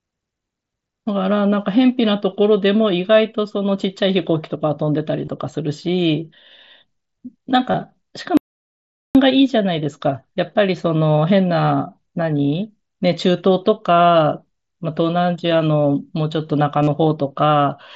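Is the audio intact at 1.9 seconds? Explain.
Yes, at 1.9 seconds the speech is intact, with no fault at that moment.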